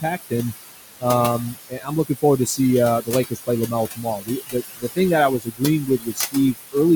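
Noise suppressor artifacts run throughout: the room noise, about 8 dB below the speech, is pulled down by about 17 dB between phrases and rises under them. Speech cut by the noise suppressor follows at 1.54–2.59 s, 3.02–4.98 s and 5.39–6.75 s, with drops of up to about 21 dB. Soft consonants and word endings, roughly 0.4, 0.7 and 0.5 s across the three spans, sound swallowed, unlike a dropout's abrupt silence.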